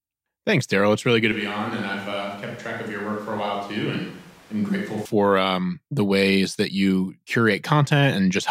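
Right after "really good to", at 1.32 s, the sound jumps abruptly into a roomy, hollow character with the low end thinned out, drops by around 5 dB, and picks up room noise sitting roughly 20 dB under the speech. That's a switch to a distant microphone: the close mic's feed likely dropped out, leaving a farther pickup carrying things. It snaps back just as abruptly at 5.05 s, on "um the ways that".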